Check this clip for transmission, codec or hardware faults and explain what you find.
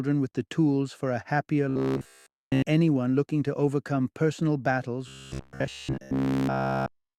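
Robotic sound from repeated short buffers appears twice, from 1.70 to 2.62 s and from 5.08 to 7.18 s. The audio becomes a rigid, metallic buzz near 66.8 Hz. The likely cause is a roughly 15 ms buffer replayed over and over while nearly all fresh audio is skipped.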